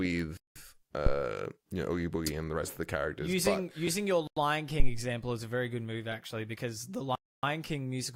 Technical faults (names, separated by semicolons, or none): block of digital silence; phantom power thump; corrupt frame decoded